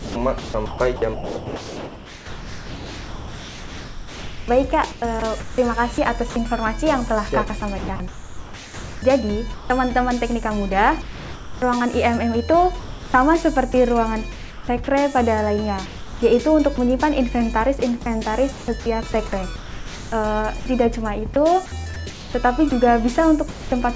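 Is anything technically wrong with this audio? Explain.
Yes. The sender's voice detector is repeatedly cutting the sound and substituting generated background noise.

Sound chopped by the voice detector occurs from 0 to 6.36 s, 7.48 to 9.70 s, 12.80 to 14.88 s, 15.86 to 16.78 s and 17.80 to 23.72 s. The detector likely toggled transmission on and off, swapping real sound for comfort noise. The sound is choppy. On a spectrogram this shows as patches of flat, featureless noise cutting into the signal.

Sound dropped by the voice detector occurs from 11.02 to 11.62 s. Quieter sound was likely treated as background, so about 0.6 s becomes steady comfort noise. On the waveform this looks like a flat, even-level block until the sound resumes.

The call path has nothing above 8 kHz, which fits a G.722 codec.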